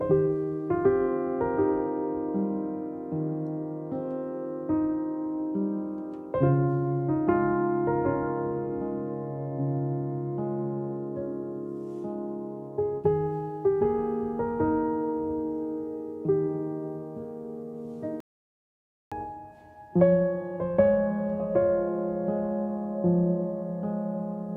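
An audio dropout to silence runs from 18.20 s to 19.12 s, cutting the sound off abruptly and bringing it back mid-flow after about 0.91 s of dead silence with no room tone. The input was likely lost while recording continued, so that stretch is gone.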